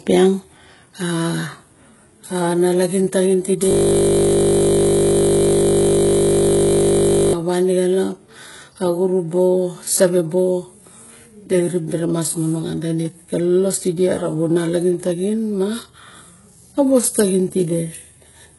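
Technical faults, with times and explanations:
Throughout: heavy HE-AAC compression, likely; treble is rebuilt by band replication above a coarse core, leaving gritty, metallic sibilance, nothing above 11.5 kHz, consistent with roughly 12 kbps.
3.71 to 7.33 s: system hang loop; a 20 ms slice of the buffer repeats continuously while the system stalls, producing a steady 50 Hz buzz instead of speech.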